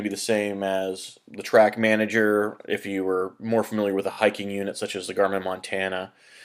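Audio with repeated frames from 4.11 to 4.19 s. A 20 ms block replays three extra times, causing a stutter and adding 60 ms.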